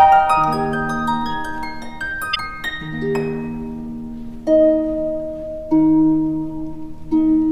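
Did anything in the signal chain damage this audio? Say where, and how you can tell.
Yes. The damage is at the codec stage, from damaged data in the compressed stream, between 2.31 and 2.37 s. For about 56 ms the sound breaks into a short chirp, squawk, click or hole. Some of the compressed bytes there were corrupted, so the decoder misread those frames, lost sync and hunted for the next valid frame header before resuming. On a spectrogram this appears as a narrow vertical smear of broadband or tonal junk. The waveform shows an abrupt discontinuity at both edges.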